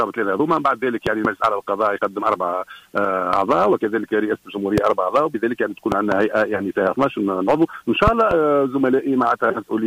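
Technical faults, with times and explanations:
Throughout, hard clipping. The signal is driven about 8 dB past what one stage can pass, so a small share of samples, under one percent, have their peaks cut flat. Those flat tops add high harmonics, heard as crackle on the loudest moments.
1.07 to 1.27 s, 4.78 s, 5.92 to 6.14 s and 8.07 to 8.34 s, loud pop. Each is a sudden pulse added on top of the sound, which carries on underneath, roughly 20 dB above the signal. The first, third and fourth are double pops. The second is a single pop. A plug, switch, static discharge or driver glitch is the likely cause.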